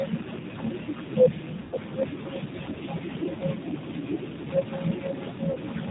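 The whole recording carries the sound of the G.729 codec: the band stops at 4 kHz, and the speech is intelligible but slightly rough and synthetic. That character fits a low-rate model that rebuilds speech from a vocal tract filter, pitch prediction and a few pulses, as at 8 kbit/s.

Speech cut by the noise suppressor also runs from the start to the end, affecting around five seconds of the speech. The suppressor mistakes soft consonants and word endings for background and pulls them down by up to about 13 dB, so they sound swallowed and faint.

VoIP packet loss concealed by the speech codec appears at 1.61 to 1.76 s (110 ms) and at 5.52 to 5.57 s (30 ms). The first gap fits about eleven lost 10 ms frames. The decoder stretches its last pitch and filter into a buzzy tone or a coloured noise that fades, and the speech stays weak briefly afterwards.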